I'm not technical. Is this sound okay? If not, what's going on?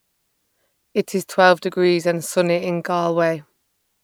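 Yes, this speech sounds fine. Nothing in it points to a technical problem.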